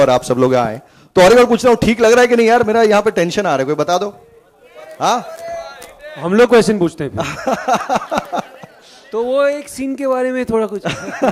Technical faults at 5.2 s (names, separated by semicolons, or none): none